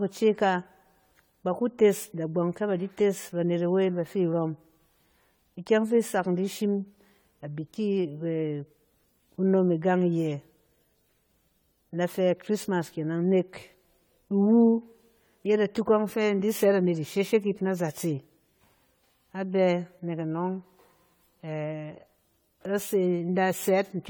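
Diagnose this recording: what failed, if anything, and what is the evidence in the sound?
Throughout the speech, a swirly, hollow smear and softened consonant attacks point to generation loss at the codec stage. This is likely from around seven successive AAC-LC passes near 64 kbit/s, each requantising on a shifted frame grid. A spectrogram shows accumulated noise and blurred onsets.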